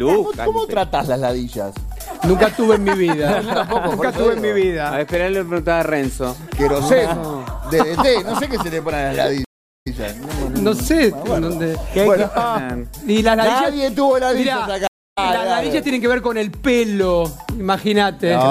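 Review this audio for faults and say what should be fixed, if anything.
Two stream reconnects: at 9.45 s the audio goes silent for 360 ms and resumes about 104 ms earlier, repeating a snippet; at 14.87 s a 241 ms gap resumes roughly a fifth of a second later, skipping material. The waveform shows flat gaps ending in a muted or fading-in restart from a fresh decoder. Prevent it with a larger client buffer and reconnection that resumes from the exact stream position.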